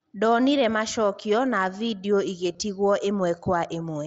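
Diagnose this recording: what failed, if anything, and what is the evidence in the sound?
The Bluetooth radio link dropped out with concealed Bluetooth headset packet loss around 2.53 to 2.59 s. That's a few short gaps over about 60 ms, the longest near 15 ms, papered over by repeating recent waveform, so you get a buzzy smear against the light mSBC graininess.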